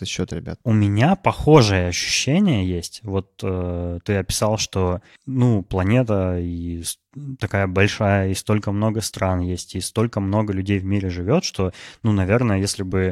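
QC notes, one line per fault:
No faults heard anywhere in the speech.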